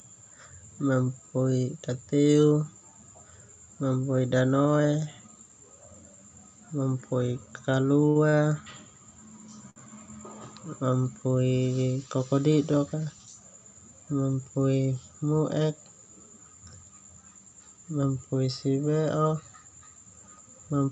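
Around 8.09 to 8.17 s, 8.29 to 8.37 s and 9.70 to 9.78 s there's a short stall from a late packet each time. The jitter buffer ran dry and the receiver held the last sound for about 60, 33 and 60 ms until the data arrived, so the speech briefly hangs with a faint buzzy smear. Nothing is lost. Then from 13.12 to 13.41 s there's a jitter buffer speed-up. The buffer had built up too much delay, so the receiver trimmed roughly 50 ms out in small pitch-period chunks. That section runs at about 113% speed with the pitch unchanged and sounds a bit rushed. All of this rides on an Opus call path limited to 8 kHz of audio bandwidth, at a bitrate around 64 kbps.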